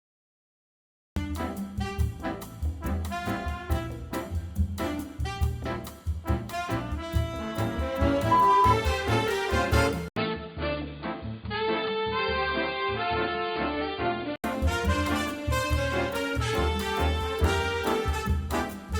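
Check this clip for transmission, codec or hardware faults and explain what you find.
Two faults turn up here, one right at the top and one in the middle.

The first is a cut-off start. The clip opens on digital silence, and the sound cuts in abruptly at 1.16 s, already mid-flow, with no attack or fade-in. That points to the recording or stream starting late, so whatever was happening before that point simply never got captured. It gives the opening a hard, chopped edge rather than a natural onset.

The second runs from 10.08 to 14.44 s. An 80 ms gap opens at 10.08 s, and then the sound comes back duller and boxier, with nothing above 4.7 kHz, a drop of roughly 5 dB, and a fresh noise floor sitting around 55 dB under the signal. At 14.44 s it clears up again. The likely cause is the input switching to a poorer device, such as another mic or a headset's call profile, with its own narrower band, level and hiss.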